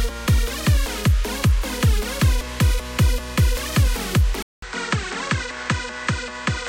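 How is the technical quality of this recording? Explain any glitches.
The recording has one fault, near its end. Input switched to a poorer device at 4.42 s: the system likely moved to another microphone or a headset's call profile, passing nothing above 8.5 kHz. After a 200 ms silence, the sound turns duller, drops around 5 dB, and gains new background noise roughly 40 dB below it.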